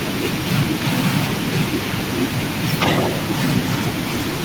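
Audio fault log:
2.79–3.23 s, echo leak: the far end is likely playing the call on a loudspeaker, and its echo canceller did not fully remove what its microphone picked back up, so that residue was returned down the line. For just under half a second a second copy of the speech trails the original by 264 ms, roughly as loud as the speech itself, giving a doubled, slap-back effect.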